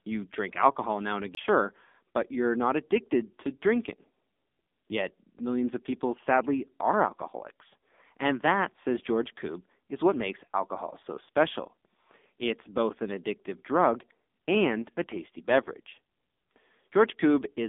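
A speech recording that sounds thin, muffled and buzzy throughout, with nothing above about 3.7 kHz and little below 200 Hz. This is the AMR narrowband mobile codec, heavily degraded: it rebuilds the voice from a vocal-tract model and a few pulses, and its synthetic quality fits a low rate around 6.7 kbps. Right after "drink alcohol now and", a tick and a brief mute of about 20 ms from 1.35 to 1.37 s break the sound, and playback resumes elsewhere. This is a CD skip, where the laser jumped to another turn of the disc's spiral.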